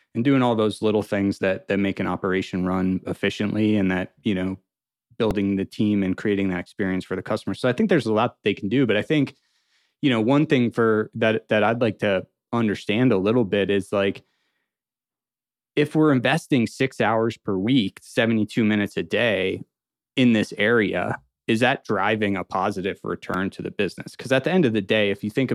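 Speech with two brief repeated buffer faults, at 5.31 s and 23.34 s. The device replayed its last 1.45 ms block, two and three extra times, which fits a 64-sample buffer. Each repeat is heard as a tiny click-buzz rather than a silent dropout gap.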